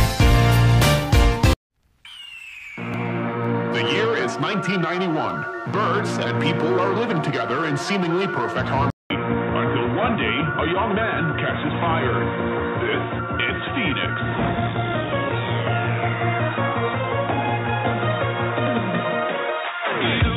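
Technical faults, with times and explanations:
8.90 to 20.37 s, input switched to a poorer device: after a gap of about 200 ms the sound turns dull and boxy, with nothing above 3.8 kHz, and a faint new background noise appears well beneath the signal while loudness stays much the same. This is likely a change to a narrower-band microphone or headset profile. A spectrogram shows the upper bands abruptly emptied from 8.90 s onward; the waveform shows a brief flat gap at the switch.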